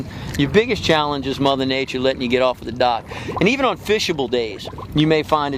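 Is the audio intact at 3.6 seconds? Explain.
Yes, the audio is intact at 3.6 seconds, with no fault to be heard at that moment.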